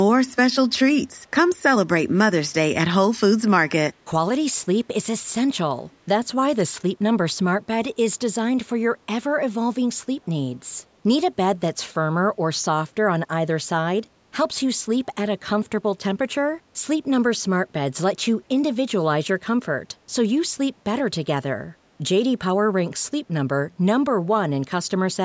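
Echo leak at 5.92 to 5.96 s in this speech recording: a brief, very faint copy of the talker returns about 393 ms late, most likely from a far-end loudspeaker whose echo canceller let residual pickup through, within call-style processing that leaves nothing above 8 kHz.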